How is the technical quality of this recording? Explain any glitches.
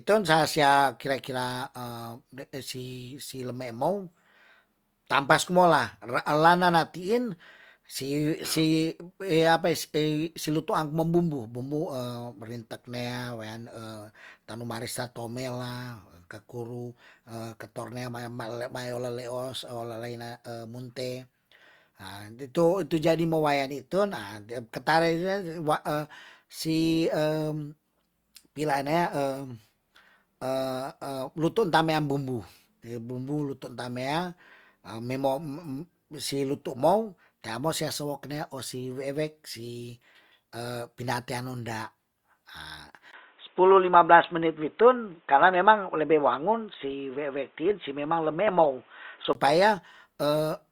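The speech has one clear glitch, from 43.11 s to 49.35 s. The likely cause is an input switched to a poorer device mid-recording, such as a second microphone or a headset's call profile. That device passes a much narrower band, with nothing above 3.8 kHz, so the sound turns dull and boxy. A brief gap of about 20 ms marks the switch, the level shifts by around 5 dB, and a new noise floor appears roughly 40 dB under the speech. At 49.35 s the fuller sound returns.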